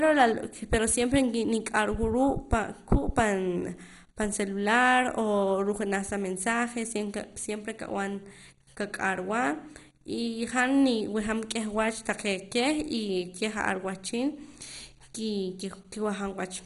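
Throughout, the speech points to heavy MP2 compression, likely at a starved bitrate that fits 56 kbps. Whole upper sub-bands are dropped, so nothing remains above 11.2 kHz, while the surviving bands flicker and are coarsely quantised, leaving a dull, gurgling, granular sound.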